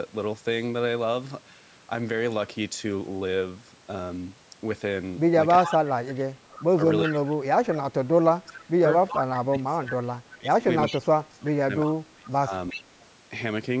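Echo leak, from 5.64 to 5.70 s, then 7.04 to 7.17, 8.48 to 9.39, 10.31 to 10.98 and 12.7 to 13.05 s: a copy of the speech returns about 369 ms late, roughly 10 to 20 dB below it, likely because a loudspeaker echo slipped past the far side's canceller.

Speech suppressed in double talk, from 5.64 to 8.84 s and 9.5 to 12.92 s: while the echo overlaps the talker, the speech dips by up to about 25 dB, affecting about two and three seconds in total. This is likely the canceller ducking both signals at once.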